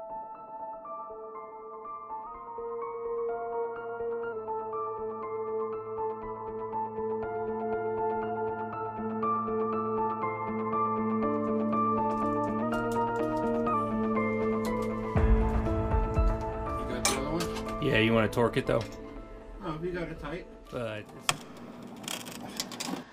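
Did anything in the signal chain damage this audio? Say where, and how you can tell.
Yes: at 2.27–4.33 s and 12.63–13.74 s the sound jumps 5.8% faster and 98 cents sharp, then snaps back, likely a buffer's drift correction step.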